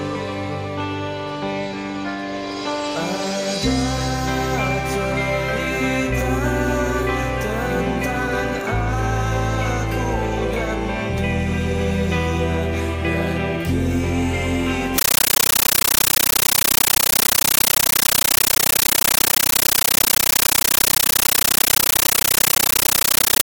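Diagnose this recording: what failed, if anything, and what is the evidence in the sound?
From 14.98 s to the end, the sound is replaced by very loud, harsh static that chatters at a steady 31.25 times a second, each burst lasting about 13.3 ms and followed by silence. This is a compressed stream played as audio, a playback-stage fault: an AC-3 bitstream sent over the digital link was treated as ordinary samples instead of being decoded. Each encoded frame plays as a noise burst padded with zeros, which fits a 640 kbps Dolby Digital stream.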